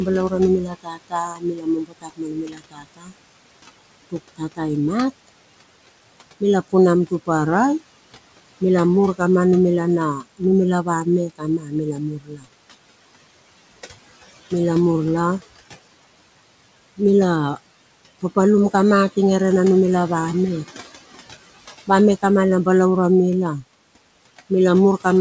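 Speech recorded in a noisy room and carried over a call path whose band stops at 8 kHz, consistent with G.722 at 64 kbps. Noise suppressor artifacts run throughout: the suppressor pulls down the bands it judges to be steady noise by about 19 dB, frame by frame, so the room noise, otherwise sitting about 16 dB under the voice, dips in the gaps and swells back beneath each phrase. Speech cut by the noise suppressor occurs where the gain rule misreads quiet speech as background and attenuates it along with the noise, by about 19 to 21 dB at the deepest. It happens from 0.6 to 3.14 s, where roughly two seconds of speech sound swallowed, and in short bursts at 4.36 to 4.61 s and 10.2 to 10.41 s, each a fraction of a second. It happens again from 11.28 to 12.48 s, where well over half a second sounds faint.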